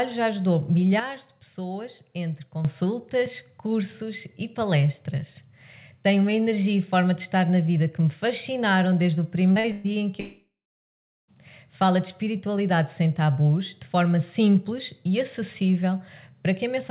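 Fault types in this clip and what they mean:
sudden gain jump: Between 1.0 and 2.65 s the sound and its background noise drop together by about 8 dB in a single step, then step back up. The likely cause is a digital gain change applied without a ramp. Unlike a fade or compression, the change is instant.
short concealed packet loss: At 9.52 and 9.60 s, about 40 ms of audio never arrived each time, and the receiver bridged each hole by extending the preceding sound. The result is a brief smear or wobble rather than a fading buzz or hiss or a silent gap.
burst of packet loss: From 9.72 to 9.87 s, about 120 ms went missing in a row. The last sound is held and turned down as the gap goes on, but it never reaches silence. This makes it longer than the short losses, with the audio resuming further along.
long network dropout: From 10.2 to 11.31 s, about 1.1 s of audio is lost, with the likely cause being a network dropout. 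The held sound fades out, and about 0.76 s of silence follows before audio returns. The silent stretch separates it from the shorter packet-loss burst.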